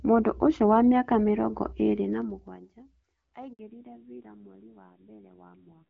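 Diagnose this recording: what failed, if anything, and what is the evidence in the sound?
Zipper noise is in the call processing gain stage. Right after "wa mĩaka mĩrongo ĩĩrĩ", from 2.05 to 2.90 s, the level falls by roughly 25 dB. It falls in audible 2 dB steps, about ten per second, and a faint tick rides on the speech as it drops. The gain is updated in coarse jumps with no ramp between them. Each jump puts a small discontinuity in the waveform, and that is the zipping.

A handover gap follows in the network stage. From 3.53 to 3.59 s the speech cuts out for 60 ms. It decays quickly and then goes silent. This fits the call being passed from one network link to another. No speech frames were delivered while the new link came up. Whatever was said in that gap is gone.

Fallback to narrowband shows up in the codec stage. From 3.59 s to the end, nothing above 4 kHz remains. The speech turns duller and rougher than the wideband stretch before it. 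The top band vanishing right after the gap points to the new link dropping HD Voice. It likely renegotiated down to a low-rate narrowband codec, around 5.9 kbit/s. That low rate explains the added roughness.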